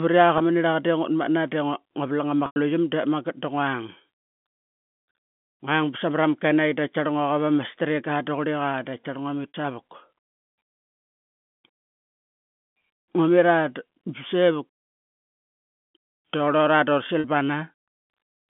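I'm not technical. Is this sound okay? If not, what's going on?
No. Four times, small chunks of the audio were lost on the way, and the receiving end filled each gap by repeating the last bit of pitch. This is packet loss with pitch repetition. You hear a brief buzzy, held sound at 0.38–0.40 s, 9.48–9.54 s just after "ngua mit", and 17.20–17.24 s. The longest gap, at 2.46–2.56 s, fades briefly toward silence before the speech returns.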